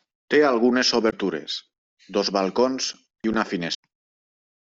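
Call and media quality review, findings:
Damaged data in a compressed stream at 1.07–1.13 s and 3.71–3.75 s: decoder misreads corrupt frames and resyncs, producing brief blips in the speech.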